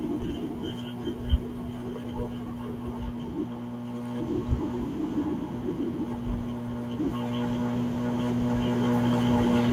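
No technical faults can be heard anywhere in the recording. Nothing in the speech calls for comment on technical grounds.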